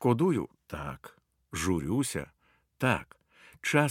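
Nothing goes wrong in this bit of speech, so there's no technical fault to point to anywhere along the way.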